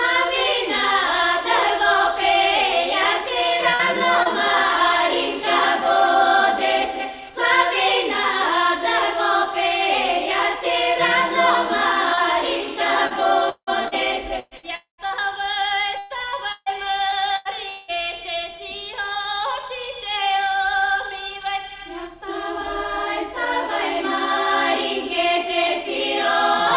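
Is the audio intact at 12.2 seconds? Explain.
No. Short concealed packet loss runs from 12.14 to 12.2 s, right at the moment asked about. About 30 ms of audio never reached the decoder in time on this narrowband call path, where G.711 mu-law leaves nothing above 4 kHz. The receiver patched roughly 28 ms of the gap by extending the preceding sound and then blending back into the real signal. It is heard as a brief smear or wobble rather than a clean continuation.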